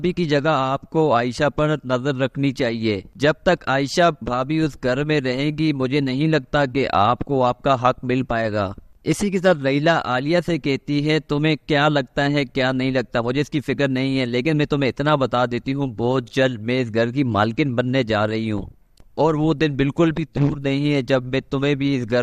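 No technical faults can be heard anywhere in the audio. Nothing breaks up, drops out or distorts at any point.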